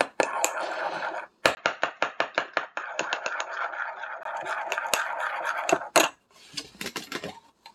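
Everyday sounds: from 1.55 to 4.25 s, after a 20 ms gap, the audio turns dull with nothing above 7.1 kHz, a few decibels quieter over a faint new noise floor. The gap, level change and fresh noise, not just lost treble, point to a likely input switched to a poorer device.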